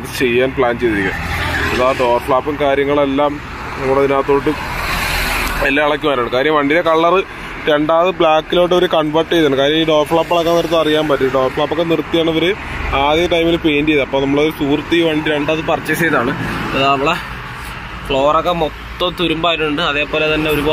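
From 0.00 to 15.42 s the audio has a wrong sample rate: it runs about 8% slow and about 1.5 semitones low, which fits 48 kHz material played at 44.1 kHz. Speed and pitch drop together, unlike a pitch shift or time-stretch, which alter only one.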